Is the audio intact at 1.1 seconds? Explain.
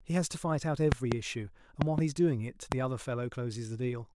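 No. A loud pop runs from 0.92 to 1.14 s, so 1.1 seconds falls inside it. Two sharp pops sit on top of the speech, peaking roughly 20 dB above it, while the speech carries on underneath. The likely cause is a sudden voltage step or pulse, from a plug, switch, static discharge or driver glitch, entering the signal chain. The following circuitry shapes each pulse into a brief, hard transient.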